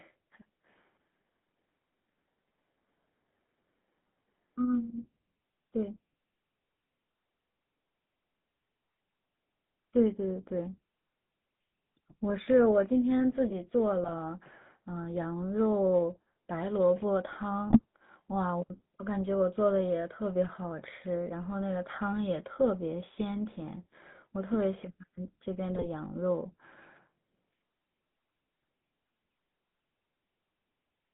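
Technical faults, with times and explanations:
Throughout: GSM full-rate codec. The speech has a buzzy, gravelly roughness and a narrow, boxy tone, passing roughly 150 Hz to 3.6 kHz. At 13 kbps the codec rebuilds the voice from a vocal-tract filter driven by coarse, regularly spaced pulses, discarding most excitation detail.
14.01–14.11 s, 17.70–17.84 s, 25.75–25.86 s: GSM bit errors. Each brief burst breaks into squawks, pops and gargling. Corrupted bits reached the decoder, scrambling filter, pitch or gain values, so the spectrum warps or level jumps for several consecutive frames.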